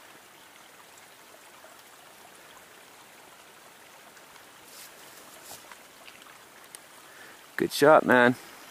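Two isolated sharp clicks mark the audio, one at 4.12 s and another at 6.09 s, each showing as a thin vertical line across the spectrum. These are most likely dropped samples, where a fraction of a millisecond of the stream goes missing and the waveform jumps straight to a later value. Unlike a dropout, no stretch of sound vanishes and no gap can be heard, only the instantaneous tick of the discontinuity.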